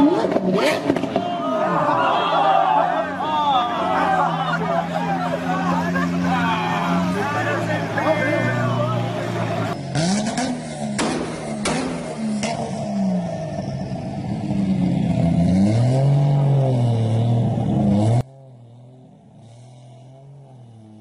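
From 18.21 s to the end of the clip, one channel of the stereo pair has likely been inverted, its polarity flipped so that whatever both channels share cancels when they are combined to mono. The result is an abrupt collapse of the sound to roughly 26 dB quieter, with the centred material falling away and only a faint residue of what differs between the two channels remaining.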